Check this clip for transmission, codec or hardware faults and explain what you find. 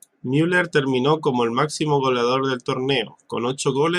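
Nothing stood out on listening to this speech recording that would point to a problem in how it was transmitted, encoded or captured.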